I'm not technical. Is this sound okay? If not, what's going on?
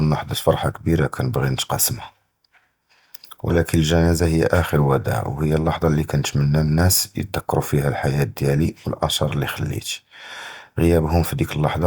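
Yes, this speech recording sounds fine, with nothing wrong.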